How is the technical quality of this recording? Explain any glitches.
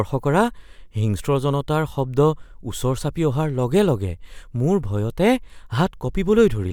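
No technical faults are audible anywhere in the recording, so there are no glitches to explain.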